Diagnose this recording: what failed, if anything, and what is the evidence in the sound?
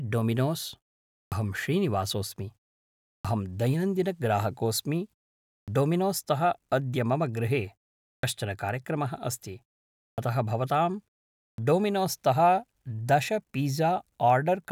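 Clipped start after a pause, at the playback device: after silences of 0.48 to 0.68 s, onsets at 1.25, 3.18, 5.61, 8.17, 10.12 and 11.52 s lose 59 to 68 ms while the sleeping output wakes.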